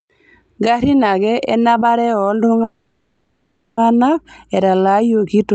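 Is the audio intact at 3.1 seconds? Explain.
No. At 3.1 seconds the sound sits inside a call audio freeze that runs from about 2.63 to 3.79 s: the last bit of speech is drawn out into a fading buzz or hiss for roughly 1.1 seconds rather than carrying on. The likely cause is delayed packets emptying the jitter buffer, so the receiver filled the wait. When the audio resumes, it continues where it stopped, with essentially nothing lost, only delayed.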